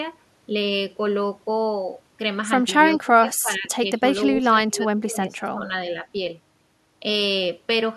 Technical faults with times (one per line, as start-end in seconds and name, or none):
2.97-4.03 speech suppressed in double talk
4.38-5.70 speech suppressed in double talk